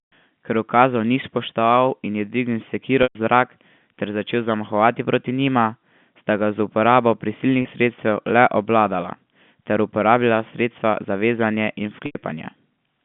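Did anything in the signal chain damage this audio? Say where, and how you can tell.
Yes. Network packet loss with pitch repetition at 3.03, 7.62 and 12.06 s. Gaps of 120, 30 and 90 ms become repeated, fading pitch periods.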